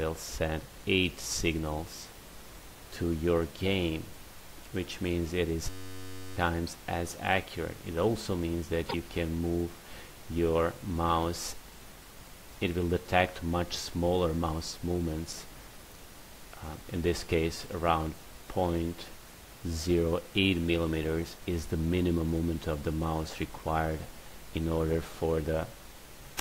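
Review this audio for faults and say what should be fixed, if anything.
System hang loop from 5.70 to 6.37 s: a single 10.67 ms slice of audio repeats exactly, over and over, producing a steady buzz at about 93.8 Hz instead of the program material. That loop length fits a 512-sample buffer, so the host or driver stopped feeding new data while the output hardware kept replaying the same ring buffer. Roughly 0.7 s of real audio is missing. To prevent it, find the driver or system stall and add a watchdog that mutes output when the buffer stops being refilled.

Damaged data in a compressed stream from 8.84 to 8.94 s: a brief glitch interrupts the audio. Corrupted bytes in the encoded stream caused the decoder to misread those frames, lose sync and search for the next valid frame header before playback resumed. To prevent it, transport the stream with checksums or error correction and decode from a verified copy of the file.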